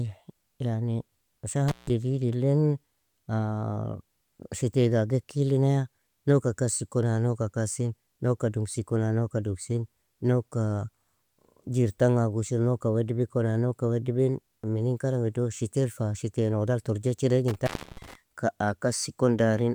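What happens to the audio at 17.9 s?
The speech drops out with crackle at each edge, leaving faint hiss, from 17.48 to 18.15 s: an intermittent contact, a loose connection opening for about 300 ms.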